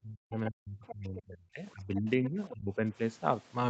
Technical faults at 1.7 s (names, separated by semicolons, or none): speech suppressed in double talk